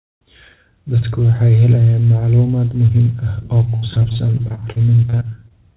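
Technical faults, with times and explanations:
3.70–5.52 s, repeated packet loss (robotic sound): after "muhiim ah oo" the speech turns choppy, with dropouts up to 67 ms. Each lost packet was patched by extending the previous sound, concealing about a quarter of this stretch of narrowband audio, which stops at 4 kHz.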